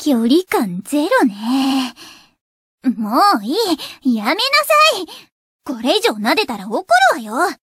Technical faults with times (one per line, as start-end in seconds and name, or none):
1.62-1.79 repeated frames